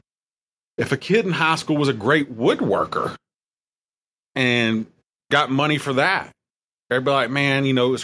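Nothing technically wrong can be heard in this speech recording, and the signal stays steady throughout without any audible defect.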